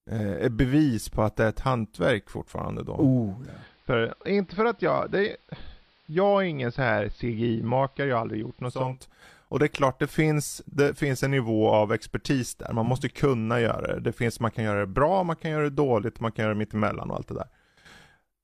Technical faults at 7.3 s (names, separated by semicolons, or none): digital radio blending to analogue